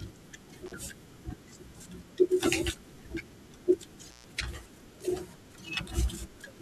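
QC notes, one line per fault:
0.66–0.74 s, intermittent contact: a loose plug or cable connection in the signal path parted briefly and then closed again, so the speech drops out for about 36 ms. The broken and remade contact produces crackle at each edge, with faint hiss in the gap.
4.09–4.26 s, intermittent contact: a loose connection opened for longer, cutting the speech for about 132 ms with crackle at both ends and faint hiss in between.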